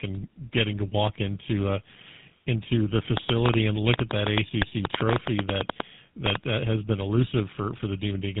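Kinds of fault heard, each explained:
Tandem speech coding: The speech went through GSM full rate coding twice, decoded to G.711 mu-law in between and then re-encoded, so the second GSM coder had to model audio the first one had already degraded. The result is rougher, more muffled and more warbly than a single pass. On a spectrogram nothing appears above 3.8 kHz, and the harmonic striations look smeared and blotchy rather than cleanly spaced. The waveform shows a softened, grainy envelope throughout.
Train of clicks: From 3.17 to 6.36 s a run of about thirty similar clicks ticks over the speech and through its pauses, at about 7.9 per second but unevenly spaced. They peak at about 15 dB above the speech, so they stand out sharply. The likely cause is interference from nearby equipment or a faulty connection or power supply. In the waveform they are narrow isolated spikes, and on a spectrogram they form thin vertical lines spanning the whole band.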